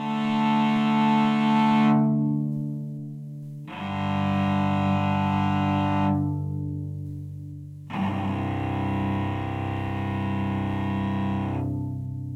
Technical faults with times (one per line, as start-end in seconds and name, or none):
none